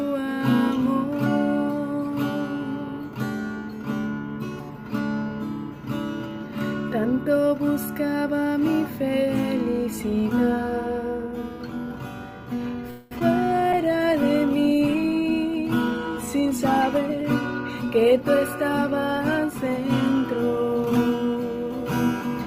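At 12.90 s the sound stops moving forward and its last moment is drawn out as a fading buzz for about 0.21 s, until 13.12 s. This is a call audio freeze, most likely packets held up in transit so the jitter buffer ran dry. The receiver bridged the wait by extending what it had. When delivery resumed, the audio picked up exactly where it left off, so nothing is lost and the timeline is simply pushed back by that 0.21 s. A dropout or edit would remove material instead.

Almost immediately after, from 13.19 to 13.21 s, there is a short concealed packet loss. About 10 ms of real audio never arrived in time, and the decoder covered it with roughly 15 ms of synthesized continuation before crossfading back. It comes across as a tiny smear or wobble rather than a hold. It is far too brief to register as a pause, which separates it from the freeze just before it.

From 13.73 s to the end, a call bitrate drop sets in. 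The encoder's budget falls from 96 kbps to 24 kbps after the bandwidth estimate collapsed, and it stays at the lowest rate for about 5.9 s. The sound becomes coarser and duller, with a watery, muffled quality as upper frequencies are trimmed. Unlike the momentary faults, this is a sustained change in timbre, not a glitch.

Overlapping that, from 14.95 to 17.10 s, a jitter buffer speed-up plays the audio at about 109% of normal pace. The buffer had built up surplus delay, likely from the late packets arriving together, and the receiver trimmed short pitch-period slices repeatedly to catch up, cutting roughly a fifth of a second in total. Pitch stays unchanged while timing feels hurried. That distinguishes it from a simple resampling error, which would raise the pitch along with the tempo.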